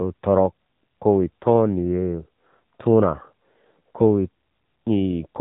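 From start to finish the speech carries AMR narrowband mobile codec damage: nothing passes above 3.8 kHz, and the vocal-tract model, starved of bits, makes voices buzzy and synthetic, pointing to a low mode near 7.4 kbps. Unlike a plain low-pass, the voice itself sounds rebuilt.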